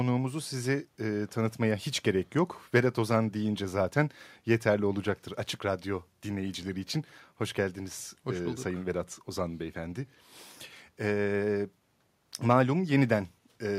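Nothing in the recording stood out as a technical fault on listening.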